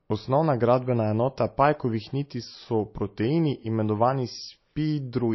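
Throughout the speech, the sound has a watery, swirling quality with chirpy, metallic s sounds and smeared consonant attacks, likely from MP3 compression at a low bitrate, around 27 kbps. A spectrogram shows a hard ceiling at 5.8 kHz, with flickering holes where weak components drop in and out between frames.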